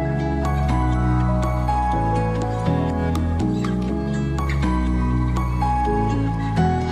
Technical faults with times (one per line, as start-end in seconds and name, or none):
6.13 compressed frames skipped